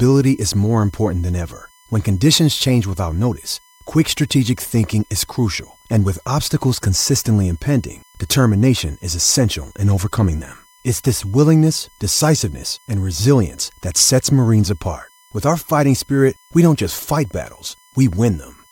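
USB whine runs throughout the speech, a steady fixed-pitch tone at 1 kHz sitting roughly 35 dB below the signal. The USB bus draws current in regular 1 ms frames, and that pulsing load leaks into the audio through shared power or ground.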